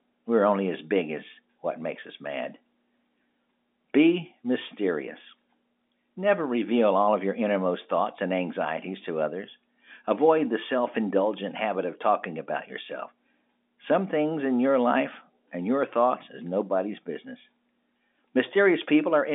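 No faults are audible in the speech; it carries the narrow band of ordinary telephone coding, from about 200 Hz to 3.6 kHz.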